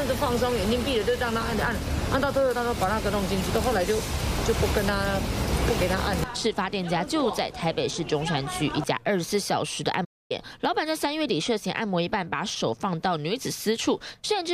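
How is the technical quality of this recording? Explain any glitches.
One glitch stands out, a playback stall from 10.04 to 10.32 s. The player most likely ran short of data or had its playback thread held up, so nothing reached the output for about a quarter of a second (roughly 254 ms). The result is an abrupt gap: the sound cuts off mid-flow, leaves a clear hole of silence, and then resumes, breaking the continuity at that point in the recording.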